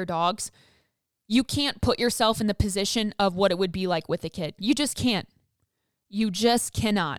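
Nothing technically wrong turns up in this speech recording; it's a straightforward listen with no faults to point to anywhere along the way.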